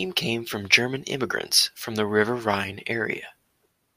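No technical faults are audible anywhere in the recording.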